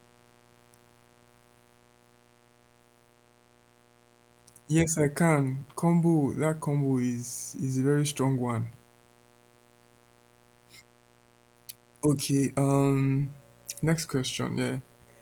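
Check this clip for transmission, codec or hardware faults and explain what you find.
One fault is present, mains buzz, and it runs from start to finish under the speech. Switching spikes leak in twice per 60 Hz cycle and form a steady, raspy buzz about 30 dB below the speech. On a spectrogram it shows as evenly spaced horizontal lines at multiples of 60 Hz, and the waveform carries a fine repeating ripple between phrases. The Opus voice compression keeps the full bandwidth and leaves only light coding traces.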